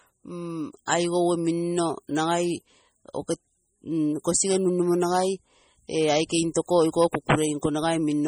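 Right through the clip there's heavy MP3 compression damage, which is the likely cause of the watery, swirly texture on the speech. The encoder has starved weak frequency lines so they flicker between frames, and nothing survives above 20.8 kHz, with the bitrate at a low 32 kbps. At 0.86 s there's a pre-echo: a short hiss runs about 18 ms ahead of a sharp attack, because quantisation noise sized for the loud onset got spread across the quiet stretch before it, so the attack comes out softened.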